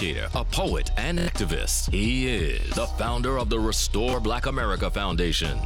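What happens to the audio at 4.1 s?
A brief stutter from 4.11 to 4.13 s: a repeated buffer, where late audio made the device replay its last roughly 23 ms block, fitting a 1024-sample buffer.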